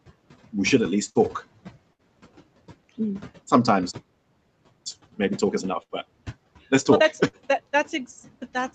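Speech, recorded over a call, with noise suppressor artifacts throughout. The suppressor pulls the room noise down by about 19 dB between phrases, and it rises again under the voice.

There are four bursts of packet loss, at 1.09–1.18 s, 1.93–2.02 s, 5.83–5.92 s and 7.27–7.36 s. In each, about 60 ms of audio never arrives. The receiver stretches the last sound for roughly 55 to 67 ms as a fading buzz or hiss. Then the speech jumps ahead past the gap.

A playback stall silences the output from 3.91 to 4.86 s, for about 0.95 s. The sound stops mid-flow. The likely cause is that the player ran out of data or its thread was blocked.

Time-compressed catch-up follows, from 4.86 to 7.86 s. The player works off its backlog by cutting and cross-fading short pieces. Speech runs about 1.25 times faster at normal pitch.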